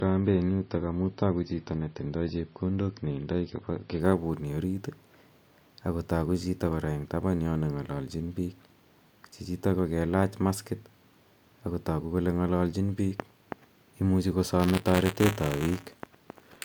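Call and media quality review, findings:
Adaptive stream starting at a low bitrate, 0.0–4.0 s. Speech band-limited, treble missing, with heavier codec smearing. At 4.0 s it jumps cleanly to better quality with no gap. Player/ABR logic. The opening rung sounds like roughly 25 kbit/s MP3, then steps up to around 128 kbit/s once throughput is measured.

Buffer tearing, 14.59–16.58 s. Steady robotic buzz at 172 Hz, present only while speech is present. Output ring buffer/audio driver. Writer and hardware read pointer have slipped. A small slice of each period replays audio about 20 ms stale, with hard joins either side. The buzz rate fits a 256-sample buffer.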